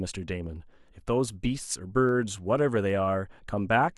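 From 2.09 to 2.90 s the speech carries CD scratch ticks: four brief clicks, the longest well under a millisecond, spaced at a rate of roughly five per second. A blemish on the disc wiped out more data on each rotation than error correction could rebuild, so the player patched or muted those samples. On a spectrogram they show as thin vertical broadband lines at regular intervals. In the waveform they appear as tiny spikes or momentary gaps.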